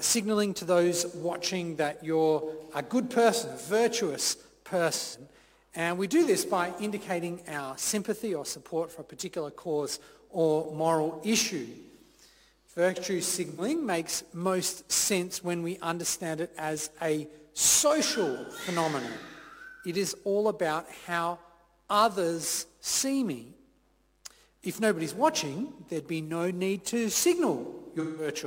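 AAC frame loss with concealment occurs at 5.00–5.19 s, 13.49–13.61 s and 28.00–28.28 s. The decoder rebuilt the missing frames from the last good spectrum, leaving brief smeared, noisy patches. The longest, about 170 ms near the end, fits roughly four lost frames.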